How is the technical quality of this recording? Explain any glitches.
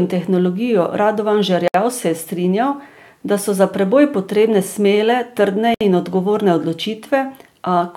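The recording has two short dropouts. Gaps at a join of encoded pieces sit at 1.68–1.74 s and 5.74–5.81 s, each roughly 64 ms, recurring every 4.0 s. Separately encoded pieces were joined untrimmed, so encoder start-up delay and final-frame padding leave silence. The speech stops abruptly and then resumes where it left off. A spectrogram shows thin vertical blank bands across all frequencies, and the waveform shows flat stretches with slightly smeared edges.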